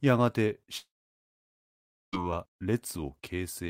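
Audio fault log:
0.77–2.15 s, long network dropout: a short fading buzz, then about 1.3 s of silence; speech resumes with about 1.4 s missing, likely from a stalled network stream.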